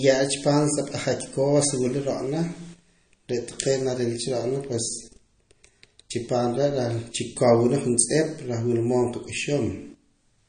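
Throughout the clip, a low-bitrate encoder has likely run short of bits, which fits MP3 compression at around 32 kbps. It has cut everything above 9.5 kHz and dropped weak detail, so the speech sounds dull and plainly watery, with swirling, chirpy s sounds.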